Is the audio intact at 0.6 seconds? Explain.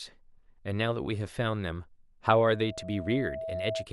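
Yes, the speech at 0.6 s plays through intact, with no dropout, click, distortion or other fault at that moment.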